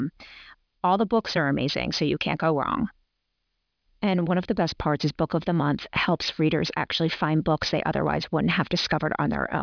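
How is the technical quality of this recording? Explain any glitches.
The quality is compromised by one fault. Aliasing runs throughout the speech. High frequencies fold back below 5.5 kHz, which points to an unfiltered drop to about 11 kHz. Sibilants sound gritty and metallic, with false tones roughly 15 dB under the speech.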